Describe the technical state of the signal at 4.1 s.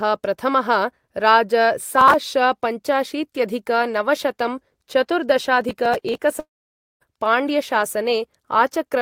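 Around 4.1 s the speech signal is intact, with no audible technical fault at that moment.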